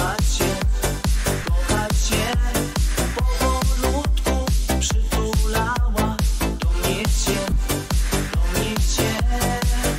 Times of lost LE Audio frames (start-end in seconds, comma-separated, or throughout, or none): 1.43, 7.50-7.56, 9.18